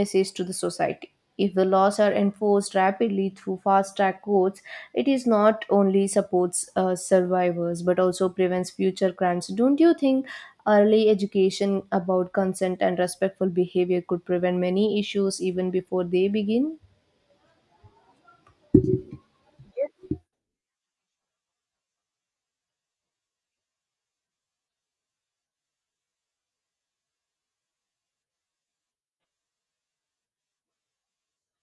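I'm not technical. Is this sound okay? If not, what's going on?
Yes, nothing wrong here.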